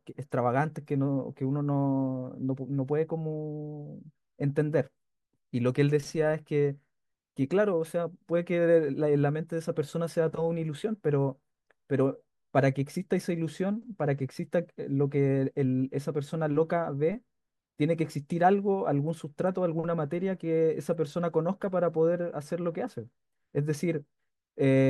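Nothing in this recording jumps out as a technical fault; there's no point anywhere where something audibly goes wrong.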